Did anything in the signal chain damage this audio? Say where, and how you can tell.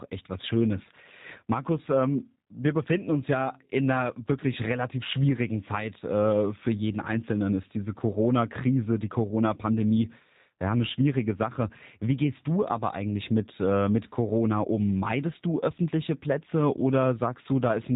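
Yes, at the codec stage: the whole clip carries G.729 damage. Nothing survives above 4 kHz, and the speech has a rough, buzzy, synthetic edge throughout, which fits G.729A at 8 kbit/s. The codec rebuilds each 10 ms frame from a vocal-tract filter, a pitch predictor and a few pulses, discarding the true waveform. A plain narrowband filter would leave the speech dull but clean, whereas this grain comes from that resynthesis.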